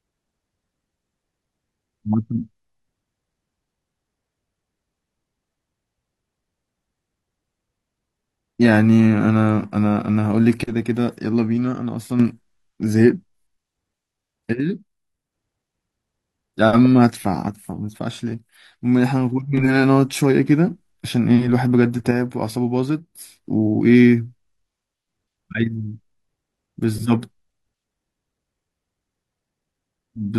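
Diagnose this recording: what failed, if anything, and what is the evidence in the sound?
One channel of the stereo feed likely drops out intermittently, most plausibly at the analogue wiring stage through a loose cable or connector. In the speech, the level falls abruptly by about 6 dB from 10.64 to 12.20 s, 14.60 to 15.32 s, 17.48 to 19.57 s and 22.11 to 23.45 s, then snaps back. When the left and right signals are summed to mono and one side goes silent, shared content halves, and anything carried only by that side vanishes.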